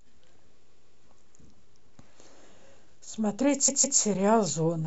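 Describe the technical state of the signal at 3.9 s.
At 3.9 s there are repeated frames, from 3.67 to 3.99 s: a block of about 157 ms plays twice more, creating an audible stutter and adding 0.31 s.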